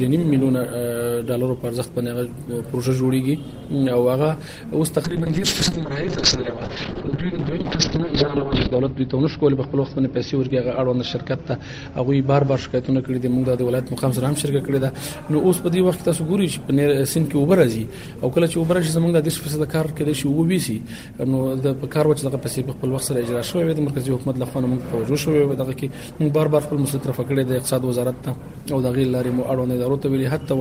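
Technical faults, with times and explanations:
5.05 to 13.13 s, call bitrate drop: the codec falls back to a much leaner bitrate, roughly 32 down to 8 kbps, and the sound turns rough and muffled as coarser coding smears detail and the band limit drops from 20 kHz to 6 kHz. It bottoms out for about 3.1 s before recovering. On a spectrogram, everything above 6 kHz vanishes, leaving a flat ceiling with blotchy, quantised texture below. The waveform envelope barely changes.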